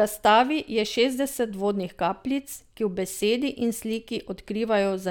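No technical faults can be heard in the speech at any point, so there is nothing to place in time order.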